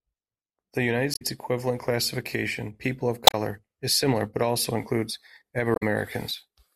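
Three short faults break into the speech, at 1.11 to 1.22 s, 3.24 to 3.34 s and 5.73 to 5.83 s, each lasting about a tenth of a second. They are damaged data in a compressed stream. At each point some bytes of the encoded audio are wrong, so the decoder misreads or rejects those frames and loses its place. It produces a brief disturbance until it finds the next valid frame header and resumes clean decoding.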